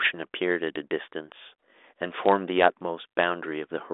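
No technical faults can be heard: the speech comes through a G.726 ADPCM path at 40 kbit/s, limited to a telephone band of about 300 Hz to 3.6 kHz with nothing above 3.8 kHz, and any trace that coding leaves is faint at most.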